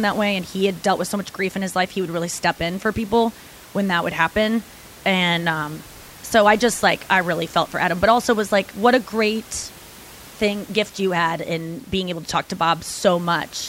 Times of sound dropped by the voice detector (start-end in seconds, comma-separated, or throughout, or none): none